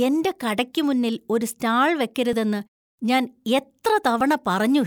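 At 2.33 s, right after "കടയ്ക്ക് മുന്നിൽ ഒരു സ്റ്റാൾ", and again at 4.21 s, the speech jumps with no gap of silence. This is most likely a dropped buffer (overrun): a few milliseconds of samples were overwritten before being read, and the audio on either side was spliced together. The missing silence distinguishes it from an underrun, where playback starves and a short hole opens.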